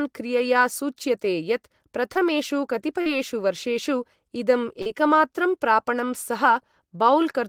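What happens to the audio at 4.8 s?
A short concealed packet loss runs from 4.82 to 4.88 s, just before "एकमात्रं प्रापणं". About 40 ms of audio arrived too late to decode. The receiver bridged the gap by extending the preceding sound, then blended back. It is heard as a brief smear.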